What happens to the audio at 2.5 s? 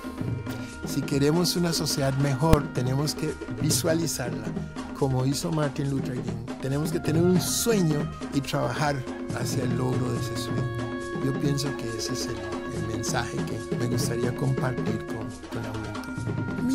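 At 2.53 s there is a single sharp bang: invalid numbers at full scale. A calculation returned infinite or invalid values that were pinned to maximum level for about 2.7 ms, which fits a 128-sample block. Unlike clipping, which flattens existing peaks, nothing of the sound survives under it; the output simply jumps to one extreme value, far beyond the audio's peaks.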